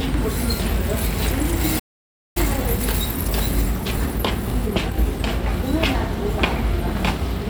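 A recording of everyday sounds cuts to dead silence from 1.79 to 2.37 s, a playback stall most likely caused by the player running out of buffered data; it appears as a flat waveform and an empty spectrogram column. From 2.37 to 5.28 s, time-compressed catch-up plays the sound about 1.15 times fast at normal pitch, so events sit closer together without any shift in spectral bands.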